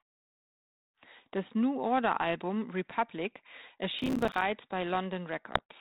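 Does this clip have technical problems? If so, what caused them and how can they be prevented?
Yes. From 3.99 to 4.42 s there is processor overload crackle. The processor missed dozens of buffer deadlines. Each miss left a short silent gap, which fits buffers of around 5 ms, and together they tear the sound. Prevent it with larger buffers or less processing load.

From 5.51 to 5.61 s there are bit errors on an ADPCM link, here the 32 kbit/s G.726 channel. Under one percent of bits flipped. Each error upset the decoder's step size and predictor, giving pops and rough bursts. Prevent it with a cleaner link or error protection.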